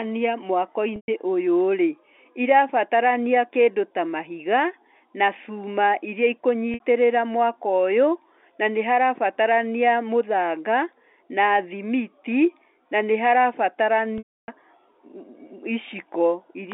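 At 0.96 to 1.08 s (120 ms), 6.74 to 6.80 s (60 ms) and 14.18 to 14.48 s (300 ms), packet loss with pitch repetition recycles the last pitch period as a held, buzzy tone. The waveform shows identical decaying cycles, and the spectrogram shows frozen harmonics. The 300 ms gap fades to silence before a brief cross-fade back into the narrowband telephone speech.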